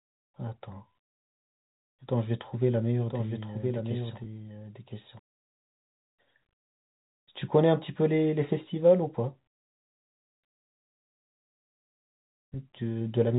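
Speech over a telephone-band path, with two faults. From 3.09 to 5.19 s a doubled audio track appears: a full-band copy trails about a second behind, a few dB quieter, and starts and stops abruptly, likely from a second, slower capture path. At 4.24 to 4.26 s, packet loss with pitch repetition bridges a 20 ms gap with a briefly held, buzzy repeat, which fits one lost packet.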